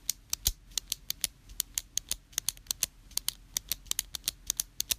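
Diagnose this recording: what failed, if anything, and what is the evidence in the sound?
Nothing stood out on listening; no stage of the chain gave any audible sign of failure in these sounds.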